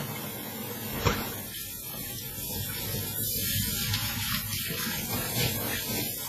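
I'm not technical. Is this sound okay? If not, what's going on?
No. Across the whole clip the sound rings and smears, with a breathing hiss and nothing above 14.6 kHz, most likely from heavy WMA compression.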